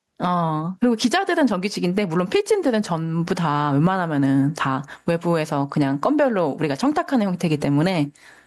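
Right from the start and all the way through, there's gain pumping on this speech. The level keeps breathing: it ducks sharply the moment the talker gets loud, swinging by about 15 dB. Loud and quiet passages end up squashed close together. The likely cause is input gain set far too hot for the mic, with a fast limiter or compressor clamping down on each peak.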